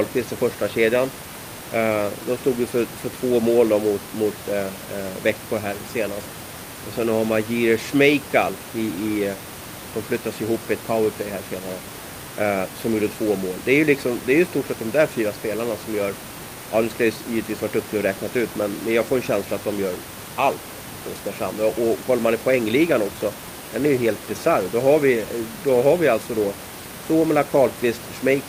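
No technical faults can be heard in the speech; the signal stays intact throughout, with only the room's own background noise sitting about 13 dB below the voice.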